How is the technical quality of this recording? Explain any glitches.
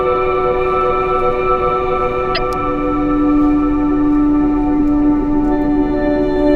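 One glitch stands out. From 2.34 to 2.38 s there is a brief disruption, caused by damaged data in a compressed stream: corrupted bytes made the decoder misread frames, lose sync and search for the next header.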